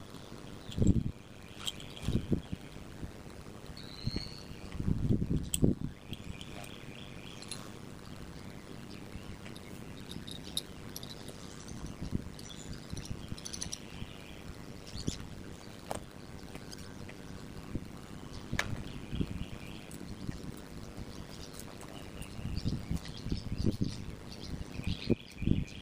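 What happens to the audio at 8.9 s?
At 8.9 s you're hearing overlap-add ripple, and it isn't a one-off: it runs through the whole clip. The audio was chopped into windowed frames and stitched back with an overlap whose windows don't add up to a steady gain, so the level dips and swells once per frame, at around 100 Hz. The swing is deep, about 60 dB, and with frames that short it comes across as a metallic buzz with extra tones around each note rather than a flutter.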